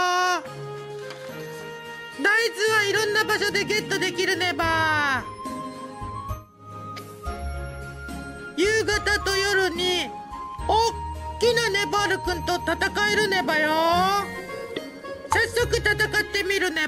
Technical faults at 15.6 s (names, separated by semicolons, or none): none